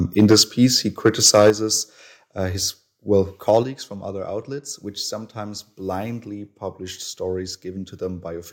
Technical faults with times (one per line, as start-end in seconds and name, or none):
0.19-0.42 microphone overload
0.33 microphone volume stepped down
1.05-1.50 microphone overload
1.50 microphone volume stepped down
3.49-3.57 microphone overload
3.63 microphone volume stepped down